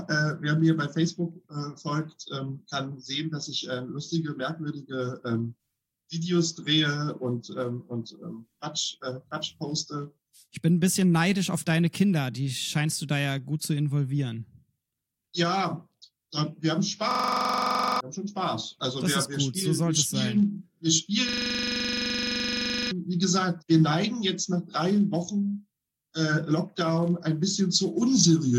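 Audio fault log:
17.11–18.01 s and 21.29–22.91 s, system hang loop: the system stalled twice while the sound hardware kept replaying its last ring buffer. A single 42.67 ms slice, which fits a 2048-sample buffer, repeats 21 times, then 38 times. At 23.4 repeats per second, this produces a rough machine-gun stutter rather than a smooth tone. Roughly a second of audio is lost in the first stall and about a second and a half in the second.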